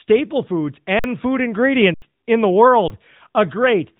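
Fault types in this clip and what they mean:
AMR narrowband mobile codec: The speech has gone through a mobile speech codec, leaving a plainly audible buzzy, synthetic quality that fits a rate near 10 kbps. On a spectrogram, all energy stops at 3.8 kHz, with an empty band above.
Underrun with held sample: The output ran dry at 0.99 s for 48 ms, at 1.94 s for 80 ms (just before "in the"), and at 2.88 s for 20 ms (just after "in the"). The waveform flattens at a held level, then resumes where audio was skipped.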